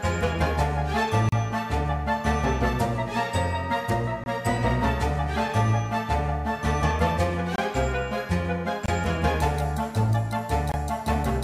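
The audio drops out in blocks of digital silence five times. The first, at 1.29 to 1.32 s, lasts 35 ms. The others, at 4.24, 7.56, 8.86 and 10.72 s, each last 23 ms, which fits a 1024-sample buffer left unfilled. Each cuts out and back with no fade.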